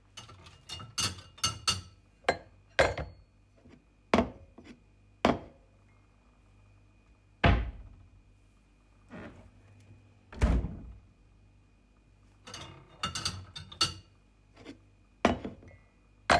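No technical faults are audible anywhere in this audio.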